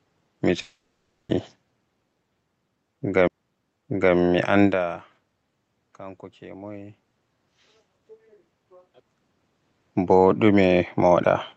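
From 0.61 to 1.31 s the sound smears into a fading buzz, then drops to about 0.4 s of silence and resumes with roughly 0.68 s missing. This is likely a long network dropout that the receiver papered over.

At 3.28 to 3.30 s and again at 11.24 s there is a tick and a sudden jump in the sound after a very brief mute. This is a CD skip: the laser jumped tracks and playback resumed from a different spot on the disc.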